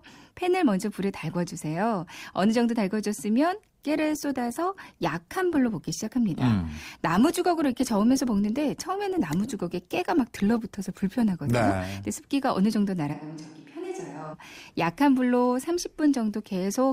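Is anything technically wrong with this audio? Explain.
Yes, there are two faults.

From 3.87 to 11.87 s, the adaptive stream drops to a lower bitrate for eight seconds. The connection slowed, so the player switched to a leaner encode of the speech. Codec artefacts become more noticeable. The change is abrupt in both directions, with no gap. The loss of detail suggests a fall from roughly 64 to 24 kbit/s.

From 13.15 to 14.32 s, the speech suddenly sounds roomy and hollow. Bass thins, and the level falls by roughly 10 dB. Room noise rises to about 35 dB below the speech. This is likely a switch to a distant microphone: the close microphone's signal dropped out, leaving a pickup further away. The return to close, full sound at 14.32 s is just as abrupt.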